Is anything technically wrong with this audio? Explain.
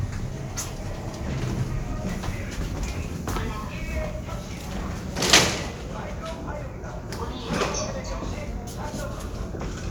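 No, nothing technically wrong stood out when listening to this audio.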